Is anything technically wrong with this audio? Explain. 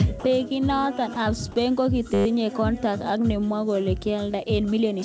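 Yes. There are two kinds of fault in this speech clip. Throughout, it passes through a call codec that leaves nothing above 8 kHz.

From 0.20 to 0.24 s and 1.14 to 1.16 s, speech briefly drops out to flat noise. The likely cause is sound dropped by the voice detector, with comfort noise filling the gap.

From 2.14 to 2.26 s, just before "kontact ab", a system hang loop repeats one 10 ms slice about twelve times. It sounds like a 100 Hz buzz, with almost nothing lost.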